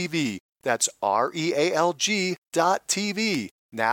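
At 1.28 s, a bit error spike produces one tick, about -30 dBFS, lasting a single sample. At 3.35 s, a louder tick reaches about -12 dBFS across three samples. Each time a flipped bit briefly jumps the sample value, then it snaps back.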